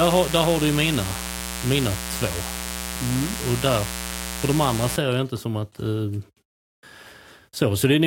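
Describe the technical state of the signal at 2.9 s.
At 2.9 s the speech sits on a mains buzz that runs from the start to 4.97 s, only about 10 dB below the speech. Sharp switching spikes, as from a dimmer, rectifier or poor shielding, land twice per 60 Hz cycle, giving a steady, raspy buzz. A spectrogram shows a dense comb of horizontal lines at 60 Hz multiples reaching several kHz. The waveform carries narrow spikes repeating every 8.3 ms.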